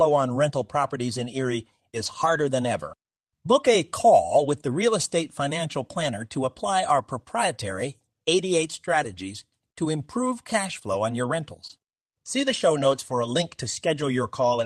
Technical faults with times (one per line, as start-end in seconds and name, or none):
2.05-2.31 lost packet rebuilt from error correction
4.37-4.39 lost packet rebuilt from error correction
5.99-6.05 lost packet rebuilt from error correction
9.03-9.21 lost packet rebuilt from error correction
11.67-11.71 short concealed packet loss
11.69 lost packet rebuilt from error correction
12.91 lost packet rebuilt from error correction